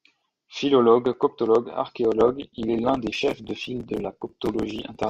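Speech clip in which, at 2.15 s, an adaptive stream at a lower bitrate takes over: quality changes abruptly, codec artefacts rise, no gap, consistent with a step from Opus 64 to 16 kbit/s.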